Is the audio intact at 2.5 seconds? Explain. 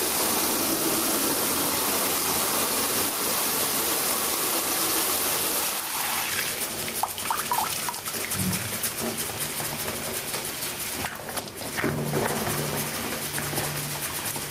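No. Gain pumping runs through the whole clip, including 2.5 s: the gain swings by about 15 dB, pulling loud and soft parts closer in level so the sound is squashed. The likely cause is excessive gain driving a fast limiter. Unlike a noise gate, it does not cut quiet parts to silence.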